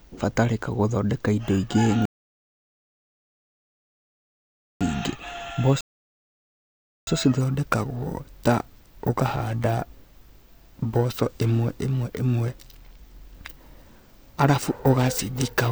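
Right after "gũthondeka indo ingĩ", at 2.05 s, the speech halts in a rebuffering stall: the player ran dry of downloaded audio and fell silent until more data came in, resuming at 4.81 s, so about 2.75 s of dead air is added. A second stall follows from 5.81 s to 7.07 s, adding about 1.26 s. Unlike a dropout, nothing is missing. The speech picks up exactly where it stopped, with time inserted rather than content removed.

From 7.41 s to the end, periodic clock jitter gives the speech a rough, metallic edge. Interference is shaking the converter's sampling clock at a rate of around 1 kHz, which places sidebands roughly that far above and below every component of the sound, and the higher-pitched parts are affected most. What separates it from ordinary distortion or noise is that the roughness rides only on the sound itself and disappears completely in the pauses.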